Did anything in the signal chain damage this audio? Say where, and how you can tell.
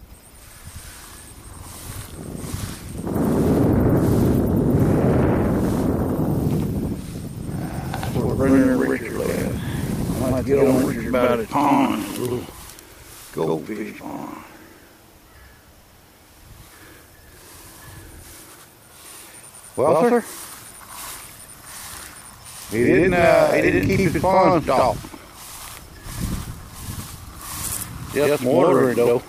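Yes. Channel delay (doubling) runs through the whole clip: every sound is followed about 92.9 ms later by an equal-level copy, a slap echo. At the driver or buffer stage, one channel lagged by a long buffer, consistent with 4096 samples, before both were summed to mono.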